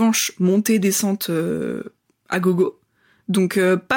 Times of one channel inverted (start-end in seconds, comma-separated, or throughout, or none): none